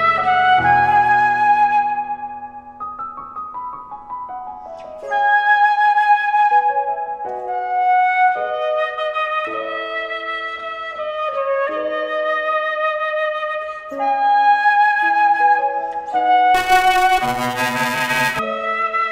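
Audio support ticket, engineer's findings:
Buffer tearing, 16.54–18.39 s. Robotic buzz at 375 Hz, fits a 128-sample buffer. Writer/reader pointers crossed: under half of each period replays audio roughly 10 ms stale, hard joins both sides. Unlike underrun: no silent gaps, buzz tracks signal only.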